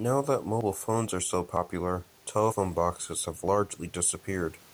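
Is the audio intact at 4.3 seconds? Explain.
Yes, the speech is intact at 4.3 seconds, with only the room's own background noise sitting about 34 dB below it.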